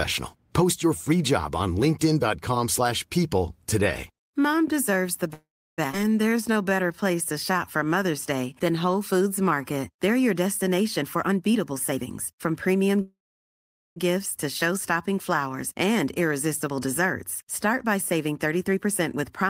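This speech clip has four kinds of fault. Two call audio freezes occur, at 5.33 to 5.80 s and at 13.01 to 13.98 s. The sound stalls, trails off, then goes silent for about 0.33 s and 0.81 s respectively. Playback then resumes where it stopped, adding 0.44 s and 0.95 s of delay with nothing lost. The likely cause is packets held up in transit and an empty jitter buffer. A skip ahead follows at 5.92 to 5.95 s. Roughly a third of a second of audio is dropped, and the two sides are joined almost directly. From 6.29 to 9.94 s, a jitter buffer slow-down plays the speech at 91% speed with unchanged pitch. Repeated pitch periods or pause fragments add 0.32 s, rebuilding the buffer's reserve. Jitter buffer speed-up happens twice. It runs at 118% from 11.02 to 12.97 s, removing about 0.4 s, and at 106% from 16.68 to 19.46 s, removing about 0.15 s. Both sound hurried at the same pitch, as short pitch-period pieces are cut to shrink excess delay.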